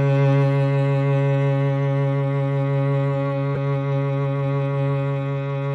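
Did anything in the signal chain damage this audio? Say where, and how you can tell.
Yes. At the codec stage, a corrupt frame was decoded: a brief burst of misplaced energy in the music from 3.55 to 3.57 s, one damaged frame played anyway.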